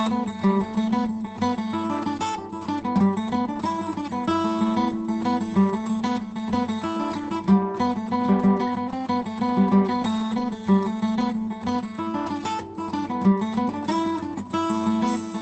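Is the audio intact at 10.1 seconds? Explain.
Yes, the sample at 10.1 s itself is intact, but it sits between two brief packet-loss repairs. From 10.01 to 10.05 s there is short concealed packet loss. The receiver extended the preceding sound for about 20 ms, which gives a brief smear or wobble. At 10.03 to 10.05 s and again at 10.19 to 10.21 s, each lost packet was rebuilt from error correction. The decoder played a low-bitrate Opus copy carried in the next packet, so each frame sounds rougher and noisier but leaves no gap. That roughness is how the error-correction repairs differ from concealment, which invents a continuation and so smears instead.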